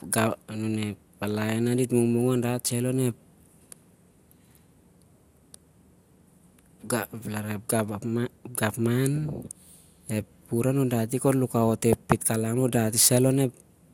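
Throughout the speech there is generation loss: a swirly, hollow smear with softened consonant attacks and nothing above 17.3 kHz. The likely cause is repeated lossy re-encoding, around seven passes, each requantising on a shifted frame grid, which fits an MP2 chain at 128 kbit/s.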